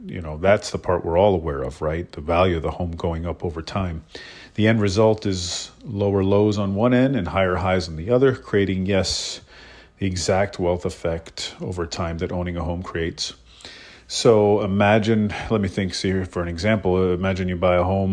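No technical faults can be heard anywhere in this speech.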